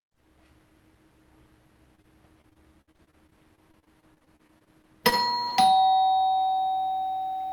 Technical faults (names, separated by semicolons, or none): short concealed packet loss; repeated packet loss (robotic sound)